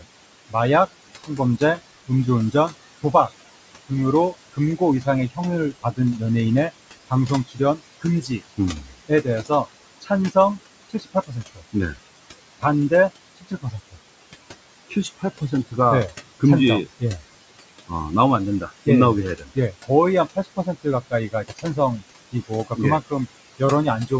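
Noise suppressor artifacts run through the whole clip. The suppressor pulls down the room noise by about 21 dB, frame by frame. That noise sits about 14 dB below the speech. It drops away in the gaps and comes back up under the speech. The call microphone processing leaves no content above 8 kHz.

Speech cut by the noise suppressor happens in eight stretches: 0.0 to 0.55 s, 1.27 to 3.3 s, 3.89 to 6.22 s, 6.97 to 10.36 s, 10.89 to 11.97 s, 12.6 to 13.97 s, 14.9 to 17.02 s and 17.88 to 24.12 s. The suppressor mistakes quiet parts of the speech for noise and turns them down with it. The deepest drops reach about 15 to 21 dB. Soft consonants and word endings sound swallowed. The losses are brief at first, a fraction of a second. They grow to about a second by 10 s, and to well over a second in the last stretch.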